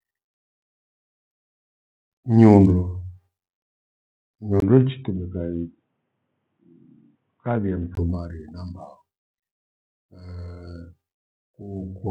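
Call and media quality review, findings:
Input likely switched to a poorer device, 4.60–7.97 s: 20 ms gap at switch, speech goes dull with nothing above 3.8 kHz, roughly 5 dB quieter, faint new noise floor.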